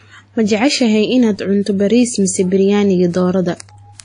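Throughout the speech, nothing is heard above 10.1 kHz. Two different kinds of codec artefacts sit together. This points to transcoding between lossy codecs, likely a low-rate AAC pass followed by WMA. The second encoder spent bits re-coding the first one's damage.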